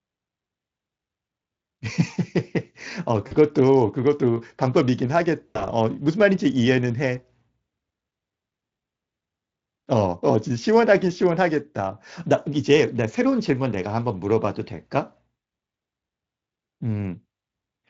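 At 3.27 to 3.33 s and 5.48 to 5.64 s, VoIP packet loss concealed by the speech codec: the Speex decoder extrapolates its last pitch and filter at falling gain, smearing speech into a fading buzz or coloured noise. The first gap is about 40 ms; the second scatters 120 ms of loss, longest run 80 ms.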